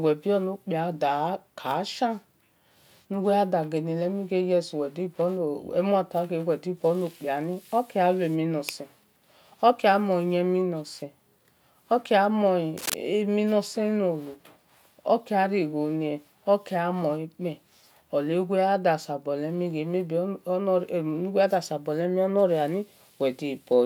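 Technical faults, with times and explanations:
12.77–12.94 s, cable scratch noise: a brief burst of dense, ragged scratching lasting about 0.17 s sits over the speech, only about 5 dB below it. The likely cause is a worn cable or connector being moved, its contact resistance fluctuating rapidly.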